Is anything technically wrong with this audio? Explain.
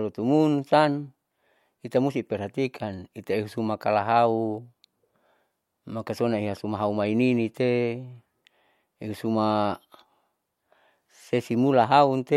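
No, nothing technically wrong turns up anywhere in this speech recording, so there's nothing here to flag.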